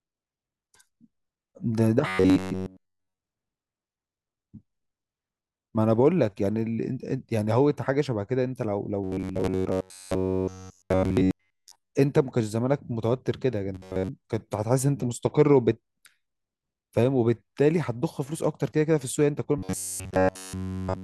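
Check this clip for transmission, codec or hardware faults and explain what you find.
The speech is hit four times by robotic sound from repeated short buffers, at 2.07–3.18 s, 9.04–11.91 s, 13.75–14.09 s and from 19.58 s to the end at 21.03 s. In each stretch the voice becomes a rigid, metallic buzz near 93.8 Hz that still roughly follows the words. The likely cause is audio arriving too seldom, so a segment of about 10.7 ms is replayed over and over while the real audio is skipped. That loop sets the 93.8 Hz pitch, and the whole of each stretch is built from these repeats.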